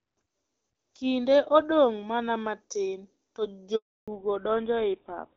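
At 3.76 s, right after "odong' mana matin to", the speech cuts out in a handover gap. The phone switched the call between networks and no speech frames arrived while the new link came up. The sound decays within a few tens of milliseconds and then there is a dead silence of 320 ms, lasting to 4.08 s. Whatever was said in that window is simply gone and is not recovered afterwards.

When the audio resumes at 4.08 s, the call has fallen back to narrowband and stays there to the end of the clip. Before the gap, the speech has the bright, extended top of AMR wideband (HD Voice), which is lightly coded and consistent with a rate around 12.65 kbit/s. After the switch, nothing above 4 kHz remains, which points to an older narrowband codec such as GSM full rate. The voice becomes audibly duller and rougher, and the sibilants lose their crispness.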